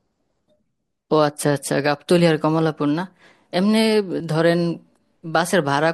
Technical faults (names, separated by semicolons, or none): overlap between stream segments